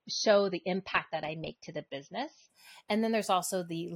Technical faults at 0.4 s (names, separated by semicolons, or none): adaptive stream starting at a low bitrate